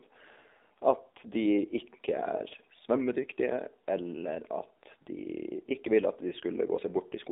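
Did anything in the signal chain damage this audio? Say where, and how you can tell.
Yes, at the codec stage: the AMR narrowband mobile codec, throughout. Speech is confined to 250 Hz–3.7 kHz and sounds buzzy and synthetic, which fits a sparse pulse-driven vocal-tract model at around 7.4 kbps.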